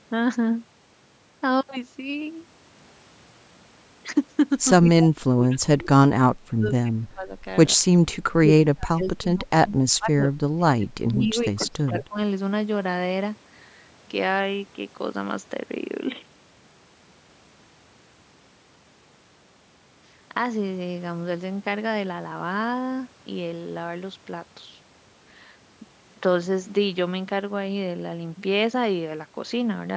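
The echo canceller likely mistook the talker for loudspeaker echo while both sides spoke, producing speech suppressed in double talk at 4.84–4.89, 5.08–5.88, 6.16–7.32, 7.75–7.80, 8.12–9.48 and 9.64–12.18 s. The voice dips, from slight losses to drops of about 30 dB that nearly cut it out.

From 11.86 to 12.05 s, echo leak occurs, likely because the far end's canceller let part of its loudspeaker pickup through. A faint copy of the speech arrives 128 ms late, roughly 20 dB below the voice, over the call's band that stops at 8 kHz.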